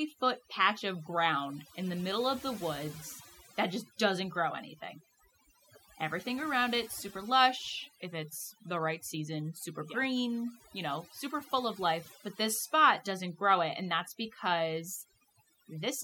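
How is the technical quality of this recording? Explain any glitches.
The recording is held back by one fault that runs through the whole clip: overdone noise removal. From start to finish, the gaps between phrases drop to an unnatural near-silence dotted with twinkling, chirpy specks. A noise reduction process was pushed too hard. Frequency bands sitting close to its noise estimate were cut deeply or muted, taking quieter parts of the speech with them.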